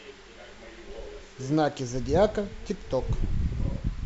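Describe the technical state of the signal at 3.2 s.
At 3.2 s the speech signal is intact, with no dropout, clipping, glitch or other technical fault at that moment.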